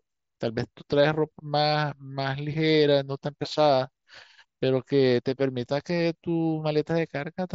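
No faults detected in this speech clip; the mSBC wideband headset path behaves as expected, with bandwidth topping out near 8 kHz.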